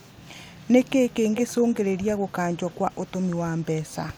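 Speech with an echo leak: a faint copy delayed about 330 ms and very quiet, returning at 0.0–0.29, 0.51–0.9, 1.12–1.54, 1.71–2.32, 2.54–2.99 and 3.61–3.65 s, likely from a far-end loudspeaker's canceller passing residue.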